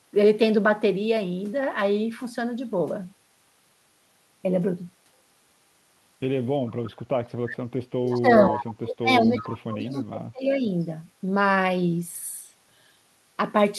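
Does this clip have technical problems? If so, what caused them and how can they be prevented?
Yes. There are three kinds of fault, all pointing to a far-end loudspeaker setup and its echo canceller.

Echo leak: delayed copies of the speech appear at 6.66–6.91 s, 8.07–8.20 s, 8.48–8.65 s, 9.38–9.43 s and 9.92–10.00 s. Each trails the original by 345 ms. The first sits about 25 dB below the speech, and the later ones range from about 10 dB to about 30 dB below. The likely cause is that the far end's echo canceller failed to remove all of its loudspeaker output from its microphone pickup, so residual echo was transmitted back. A better-converged canceller, lower speaker volume, or a headset would prevent it.

Background gated by the echo canceller: at 7.25–7.37 s the room background dips by about 15 dB for roughly a tenth of a second, then recovers. While the loudspeaker was active, the canceller's suppressor pulled the microphone gain down hard and released it shortly after. 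Gentler suppression, or comfort-noise insertion during attenuation, would keep the background steady.

Speech suppressed in double talk: from 8.0 s to 10.64 s the speech dips and breaks up, falling by as much as roughly 30 dB over about two seconds in total. This overlaps the echo bursts above. The likely cause is both sides talking at once, with the canceller unable to tell the near talker from the loudspeaker echo and attenuating both. An echo canceller with reliable double-talk detection, or full-duplex headsets, would prevent it.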